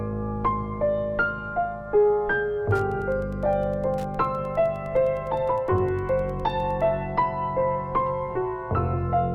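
A nearby Wi-Fi radio's beacon, rectified by the audio circuit, causes Wi-Fi interference from 2.68 to 6.88 s: faint ticking every 102.4 ms, well beneath the main sound.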